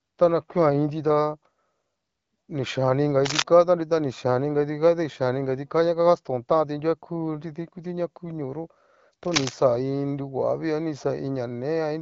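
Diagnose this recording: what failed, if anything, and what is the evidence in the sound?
Rough scratching bursts at 3.25–3.43 s, after "ni xhian ni inga", and 9.24–9.54 s, before "iin ñoguavii a ni", rising to the speech's level or slightly above it. This is cable scratch noise in the analogue wiring, likely from a worn connector whose contact resistance flickers as it moves.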